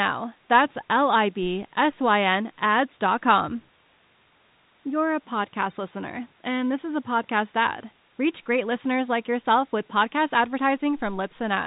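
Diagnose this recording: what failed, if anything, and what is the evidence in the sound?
Nothing in the recording points to a failure at any stage. The speech carries the narrow band of G.711 telephone coding, with nothing above about 3.8 kHz, as a normal phone path would give.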